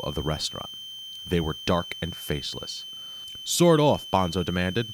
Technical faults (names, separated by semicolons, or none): switching supply whistle